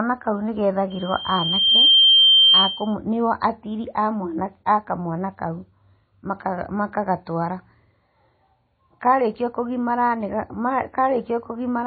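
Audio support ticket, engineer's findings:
Likely MP3 encoding at a low bitrate (fits about 24 kbps), for the whole clip: weak spectral lines dropped frame to frame, plainly audible watery codec damage, nothing above 4.5 kHz.

Loudspeaker feedback squeal, 0.90–2.95 s, after "kau nĩ", ending before "nĩguo atiri": mic picking up its own speaker, loop gain above one; 3.2 kHz tone builds over about a second to about 10 dB over the speech.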